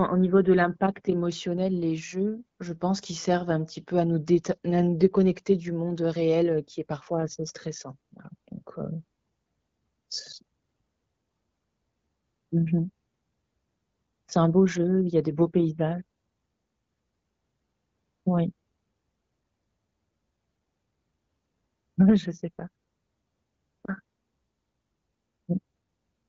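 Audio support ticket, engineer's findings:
No faults found in speech.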